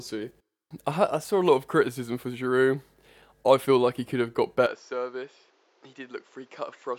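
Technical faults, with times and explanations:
4.66–6.98 s, input switched to a poorer device: speech abruptly loses everything above 7.6 kHz, falls about 10 dB, and gains a new noise floor, likely a different microphone rather than simple filtering.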